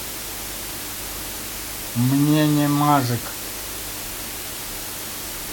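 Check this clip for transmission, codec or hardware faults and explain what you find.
Low bit depth with dither runs throughout. The speech sits on just 5 bits, with dither added before rounding. The rounding error becomes a steady, even hiss, nearly as loud as the speech.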